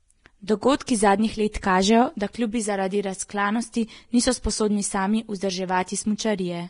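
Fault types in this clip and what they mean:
Vorbis compression: throughout, treble detail dissolves into grainy hiss and nothing remains above 10.6 kHz, which fits Vorbis coding near 32 kbps as the likely cause.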